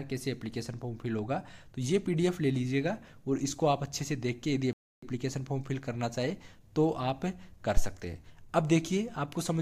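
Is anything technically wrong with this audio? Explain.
Yes, there are two faults.

At 4.73 s the sound cuts out for 295 ms, until 5.03 s. This playback stall likely came from the player running out of data.

At 7.77 s there is a deep phantom power thump. A supply switching on a live input sends a step through the coupling capacitors, decaying within about 31 ms.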